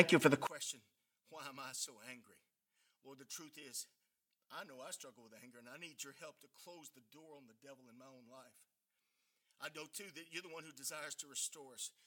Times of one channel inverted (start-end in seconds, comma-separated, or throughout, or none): 0.47-12.07